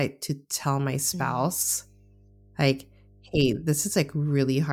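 From 0.63 s to the end of the speech, a steady mains hum at 50 Hz sits under everything, around 30 dB below the speech. Power-line current is leaking into the signal path, most plausibly through a ground loop or stray coupling from a nearby transformer, so a constant low drone continues through pauses and words alike. On a spectrogram it appears as an unbroken horizontal line at 50 Hz starting at 0.63 s; in the waveform, quiet gaps show a small regular ripple instead of flat silence.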